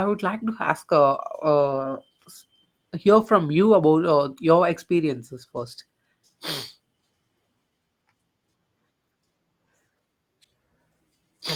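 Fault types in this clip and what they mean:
Lost packet rebuilt from error correction: missing packets replayed from low-bitrate copies, so the waveform stays unbroken, but short stretches turn rough and noisy, showing as grainy, smeared spectrogram patches.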